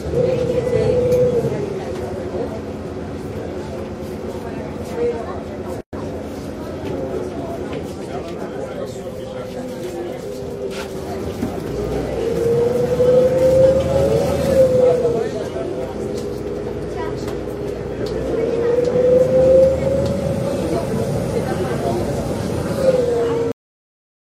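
At 5.81 s the everyday sound breaks into a silence of about 120 ms, lasting to 5.93 s, and then resumes exactly where it left off. This is a gap at a join of encoded pieces: separately encoded segments were spliced without trimming each run's leading encoder delay and final-frame padding. At 23.52 s the audio halts mid-sound and falls straight to digital silence with no natural decay. This cut-off end means the final buffers were never written out or played.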